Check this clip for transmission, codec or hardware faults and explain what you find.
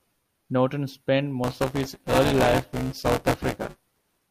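One fault is present: buffer tearing, from 1.44 s to the end. The ring buffer's writer and the hardware reader have slipped into each other, so roughly a third of each 5 ms period replays speech from around 15 ms earlier. The hard joins give a robotic 200 Hz buzz wherever speech is present.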